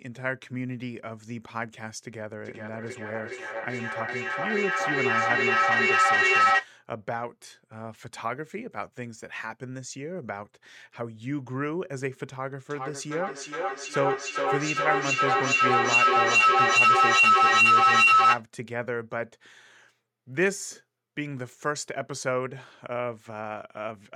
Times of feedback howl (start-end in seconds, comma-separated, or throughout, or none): 12.70-18.47